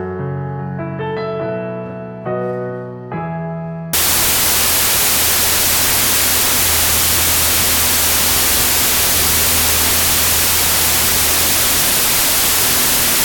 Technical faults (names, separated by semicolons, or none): wrong sample width